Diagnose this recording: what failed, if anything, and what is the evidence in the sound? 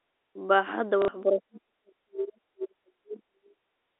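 Network stage first: packet loss with last packet repeated, from 1.02 to 1.08 s. About 60 ms goes missing, which fits two lost packets of roughly 30 ms each, and the receiver just replays the last good packet to fill the hole. The replayed chunk doesn't line up with the pitch period, so you get a brief robotic stutter, buzzing at around 33 Hz, before real audio resumes.

Then in call processing, from 1.23 to 3.62 s, the near-end talker sinks, with the deepest dips somewhere around 40 dB and roughly 2 s of the stretch affected in total. That's speech suppressed in double talk, and the likely trigger is both ends talking at once: the echo canceller can't tell the local voice from loudspeaker echo, so it clamps down on everything, including the talker.

Last, at 3.9 s through to the end of the clip, the room tone drops by about 25 dB for roughly 100 ms. That's background gated by the echo canceller. 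With the far end playing, the canceller slams the mic gain down, taking the ambience with it, and the clip ends before it lets go. All of this sits inside the usual G.711 A-law telephone band, roughly 300 Hz to 3.7 kHz.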